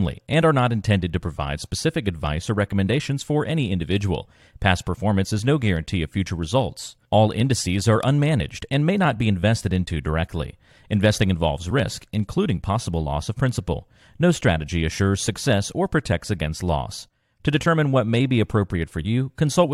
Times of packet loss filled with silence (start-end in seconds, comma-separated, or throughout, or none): none